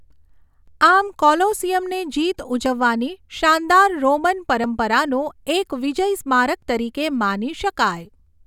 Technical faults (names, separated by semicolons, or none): overlap between stream segments